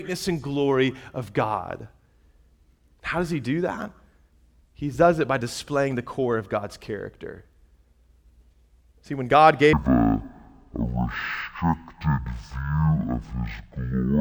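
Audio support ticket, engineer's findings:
Stereo read as mono from 9.73 s to end of clip. Speech drops to half speed, pitch about an octave (12 semitones) low, faint mirrored image in upper half of spectrum. Probable component: decoder or file reader channel-count handling. Interleaved left/right samples consumed sequentially as one channel, so each stereo frame stretches over two mono sample periods at the original rate. Playback duration doubles and all frequencies halve.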